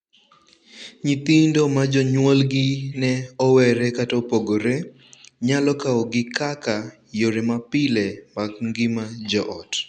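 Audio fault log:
Nothing worth logging turns up anywhere in this speech.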